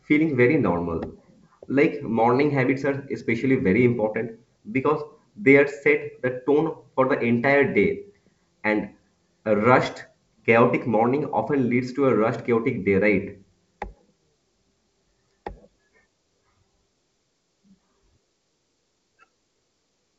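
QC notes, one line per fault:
No faults found; the speech is carried on G.722 wideband telephone coding at 64 kbit/s, with nothing beyond faint coding trace.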